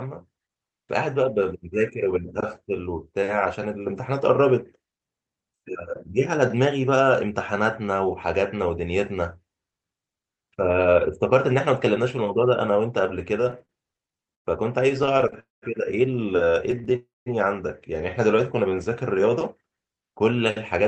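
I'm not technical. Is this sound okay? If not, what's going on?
No. The speech has timing problems from a network call.

Repeated stalls (stutter) occur from 13.41 to 14.47 s, 14.89 to 15.36 s, and 16.66 to 16.88 s. Sound arrived late, so the receiver kept stretching the last bit while waiting. You hear choppy, dragging speech. The longest pause is about 0.1 s.

A call audio freeze happens at 15.40 to 15.64 s and again at 16.96 to 17.28 s. The sound buzzes briefly, then goes quiet for about 0.17 s and 0.19 s. It then picks up where it stopped. The likely cause is sound held up on the network.

Jitter buffer slow-down runs from 16.45 to 16.90 s and from 18.37 to 19.31 s. The receiver was low on stored sound, so it repeated tiny slices to build a reserve. Speech plays at about 92% and 94% speed. The pitch stays the same, but the speech sounds drawn out.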